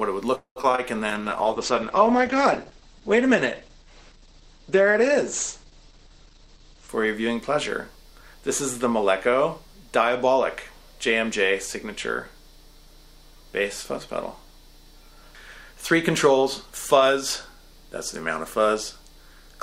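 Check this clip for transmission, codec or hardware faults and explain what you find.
Four kinds of network and codec fault can be heard, all within the first ten and a half seconds.

From 0.35 to 0.70 s there is what sounds like a call audio freeze, likely caused by packets being held up in transit until the receiver's jitter buffer ran dry. The receiver keeps the last sound going as a fading buzz or hiss, which falls to about 90 ms of silence. When packets resume, the audio picks up where it left off, so about 0.21 s has been inserted and nothing is lost.

Short concealed packet loss occurs at 0.62 s, from 0.72 to 0.75 s, and from 0.75 to 0.80 s. Each time about 20 ms of audio never reached the decoder. The receiver patched the hole by extending the preceding sound, either from its pitch or as shaped noise, then crossfaded back into real audio. Each event is heard as a brief smear or wobble, and a short sound within the hole can disappear.

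A call bitrate drop runs from 1.11 to 6.97 s. The bandwidth estimate collapsed, so the encoder went from 96 kbps down to 11 kbps and stayed at the bottom for about 5.8 s. At that rate Opus codes coarsely and narrows the audio band from 20 kHz to 8 kHz. The result is rough, watery and muffled, and it clears once the bitrate returns near 6.97 s.

Jitter buffer speed-up follows in three stretches: 5.88 to 7.41 s and 7.88 to 8.50 s at 105% speed, and 8.90 to 10.35 s at 106%. The buffer held more audio than its target, so the receiver repeatedly cut out pitch-period-sized slices to reduce the delay. That removed roughly 70, 40 and 100 ms respectively. The audio plays faster at unchanged pitch and sounds hurried.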